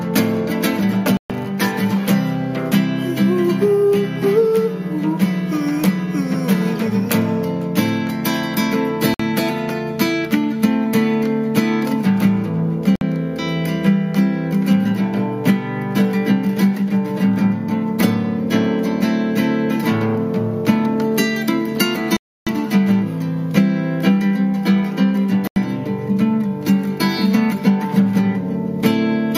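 The sound cuts to dead silence and then carries on at 1.17 s (127 ms), 9.14 s (54 ms), 12.96 s (57 ms), 22.17 s (300 ms) and 25.47 s (86 ms). These are likely Bluetooth stalls: delayed wireless packets emptied the headphones' buffer, halting playback until the resent data arrived.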